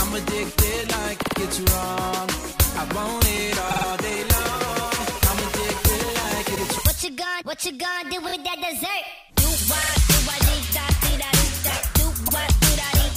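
You'll hear a stutter from repeated frames at 1.22–1.37, 3.70–3.85, 6.55–6.62, 8.27–8.33, 9.81–9.92 and 12.27–12.32 s. Short chunks of 26 to 78 ms, which fits roughly 26 ms frames, get replayed once to three times.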